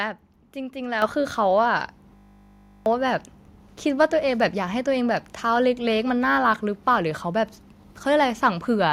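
At 1.02 s the speech and the room behind it suddenly get louder together, by about 8 dB, in a single jump with no fade. That is a microphone volume step-up: the call software decided the input was too quiet and raised the device's input volume all at once. Because the boost happens at the source, voice and background noise rise equally, and the new level stays put afterwards.

From 2.16 s to 2.86 s the speech is replaced by a flat, rough buzz at 50 Hz, with a droning, mechanical tone. This is a system hang loop. While the computer or its audio driver was frozen, the sound hardware kept replaying the same 20 ms stretch of its ring buffer over and over. A loop that short fuses into a steady tone rather than a stutter. The speech that should have filled those 0.7 s is gone.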